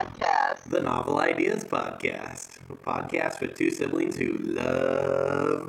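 Overlap-add ripple runs through the whole clip. The sound was split into windowed frames and rejoined with overlaps that do not sum to a steady gain. Level dips by about 60 dB once per frame, around 40 times a second. It sounds like a harsh, robotic flutter.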